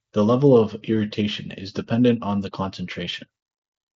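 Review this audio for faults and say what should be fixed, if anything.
No faults found here, so nothing needs fixing.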